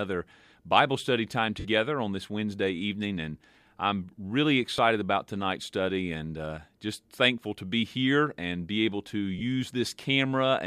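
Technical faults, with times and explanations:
1.59–1.66 s, 4.77–4.79 s, 9.39–9.41 s, lost LE Audio frames: brief grainy smears after "study time", "I'm really" and "and be able to". The LC3 decoder filled each gap by replaying the last spectrum with scrambled phase. The first gap is about 52 ms, roughly seven 7.5 ms frames; the others are shorter.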